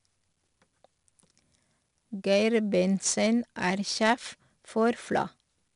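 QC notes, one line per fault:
Throughout: 4-bit ADPCM compression. The speech carries a plainly audible gritty hiss that rises and falls with its level, because each sample is coded as a coarse 4-bit step from a prediction. Nothing is heard above 10.6 kHz, which points to a reduced sample rate.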